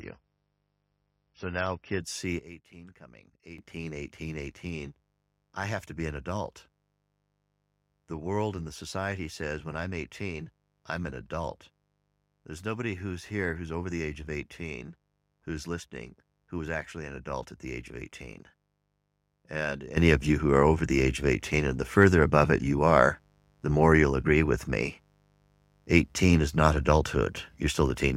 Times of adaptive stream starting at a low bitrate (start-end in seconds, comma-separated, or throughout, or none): 0.00-2.00